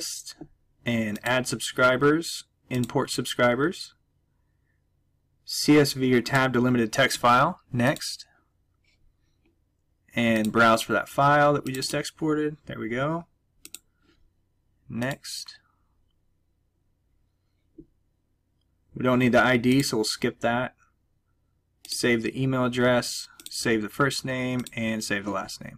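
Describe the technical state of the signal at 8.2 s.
At 8.2 s there's hard clipping, present throughout: peaks driven about 8 dB past full scale get sliced flat, giving a brief crackle on the loudest moments.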